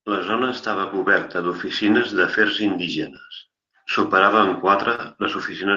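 Packets went missing at 0.81 to 0.87 s, just before "coberta d'oficines", and again at 2.29 to 2.35 s, just after "coberta d'oficines". Each time the following packet carried a low-bitrate backup, so this is a lost packet rebuilt from error correction: about 40 ms of rougher, noisier sound with no gap. At 4.95 to 5.00 s, after "superava en", about 20 ms arrived too late and became a short concealed packet loss. The decoder extended the preceding sound for about 25 ms, leaving a brief smear. From 4.98 s its final 20 ms was again rebuilt from the backup copy, so it ends in the same grainy texture.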